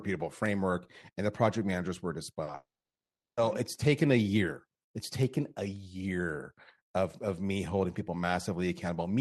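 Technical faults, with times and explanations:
2.43–2.49 s and 2.51–2.55 s, short concealed packet loss: about 40 ms and then 20 ms of the call arrived too late to be decoded, so the receiver covered each gap by extending the preceding sound, carrying its pitch forward where it was voiced or shaping noise where it was not, and then blending back into the real signal. The result is a quick smear or wobble just before the longer break.
2.55–3.39 s, long network dropout: about 820 ms of audio never arrived. The decoder first stretches the last sound into a fading buzz or hiss lasting roughly a tenth of a second, then leaves about 720 ms of near silence before the sound resumes further on, with the missing stretch simply gone. The length of the gap and the concealment that fades into quiet point to a likely network outage rather than a local glitch. Around the gap, the call codec's band limit near 12 kHz and its coding noise can be heard.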